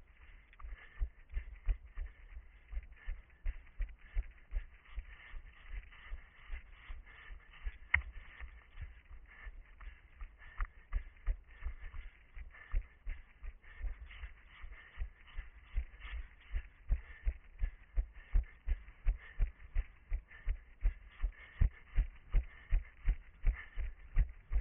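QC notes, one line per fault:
Nothing stood out on listening.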